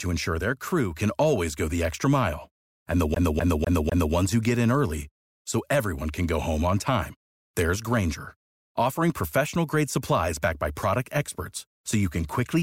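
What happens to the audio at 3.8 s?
At 3.8 s the player is caught in a CD stuck on one turn: a scratch keeps throwing the laser back a track, so from 3.15 to 4.15 s the same 0.25 s of speech repeats four times, each jump marked by a brief mute, before the audio resumes at "ones who get in".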